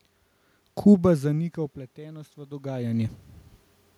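Speech, with automatic gain rising from 0.87 to 3.21 s. The talker moves around 1 s, and the input drops by about 24 dB. The gain control slowly adds about 7 dB to compensate, so the voice and the room noise swell together.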